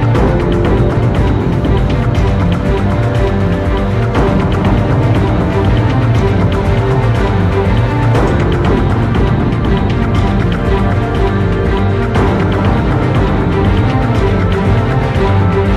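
Nothing stood out as a technical problem on listening.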